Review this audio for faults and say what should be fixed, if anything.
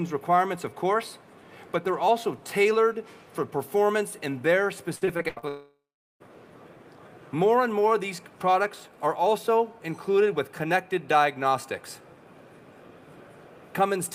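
From 4.95 to 5.44 s there is repeated packet loss, giving a robotic sound. Six short holes appear, the longest about 81 ms. Each is patched by stretching the previous sound, so nearly half this span sounds choppy. A larger jitter buffer with forward error correction would prevent it.

From 5.48 to 6.22 s the sound smears into a fading buzz or hiss, then about 0.42 s of silence, and resumes with roughly 0.7 s missing. This is likely a long network dropout. A more stable connection would prevent it.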